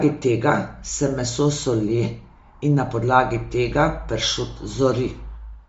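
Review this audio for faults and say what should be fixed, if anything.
Throughout the speech, the upper spectrum sounds thinned and partly replaced by noise, giving the voice a breathy, grainy edge. This is likely Bluetooth LC3 compression at a low bitrate, consistent with about 32 kbps and 10 ms frames, discarding high bands and noise-filling them. Raise the LC3 bitrate or record over a wired connection.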